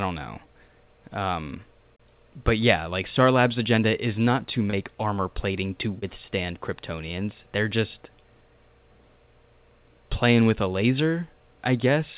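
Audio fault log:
4.70 s and 5.99 s, short concealed packet loss: about 30 ms of speech arrived too late each time, so the receiver extended the preceding sound, leaving brief smears.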